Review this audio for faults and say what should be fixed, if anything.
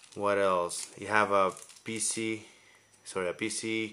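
Nothing stood out on listening, so there is nothing here that needs fixing.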